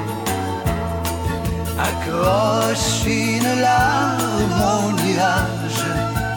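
No technical faults are audible.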